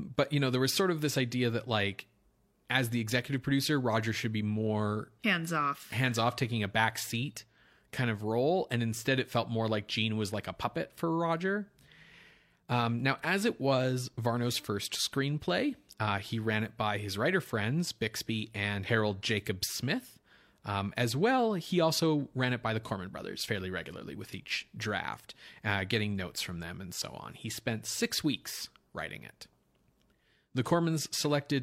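Nothing stood out on listening to this recording.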